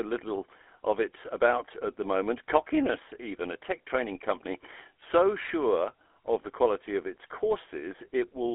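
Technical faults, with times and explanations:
Throughout: GSM full-rate codec. The speech sits in a 300 Hz to 3.4 kHz telephone band with nothing above 3.8 kHz. It has a plainly audible buzzy, gravelly roughness from a vocal-tract model driven by sparse regular pulses, which fits a 13 kbps link.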